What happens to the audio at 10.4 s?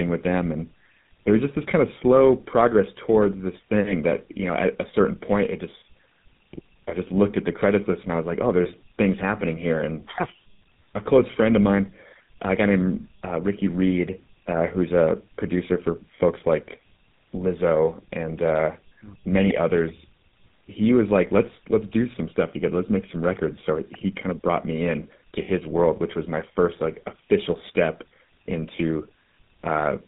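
At 10.4 s, as across the whole clip, tandem speech coding is at work. The speech was coded with GSM full rate, decoded onto a G.711 A-law link, then GSM-coded again, compounding the first coder's errors. It sounds rough, muffled and warbly, with nothing above 3.8 kHz.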